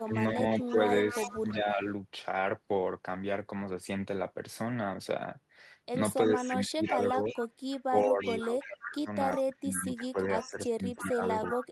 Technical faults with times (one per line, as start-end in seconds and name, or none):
0.00-1.54 echo leak
0.03-1.84 speech suppressed in double talk
6.28-7.36 speech suppressed in double talk
6.89-9.56 echo leak
7.89-11.72 speech suppressed in double talk
10.40-11.64 echo leak